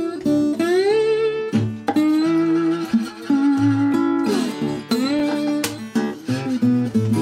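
At 5.19 to 5.21 s, chunks out of order: one 10 ms chunk plays a chunk late, swapping positions and leaving hard joins that produce a brief jumble.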